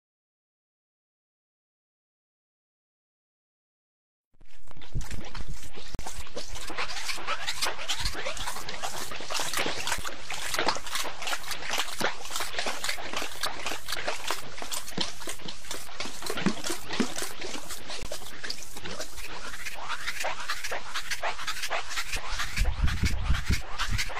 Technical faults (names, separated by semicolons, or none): gap between stream segments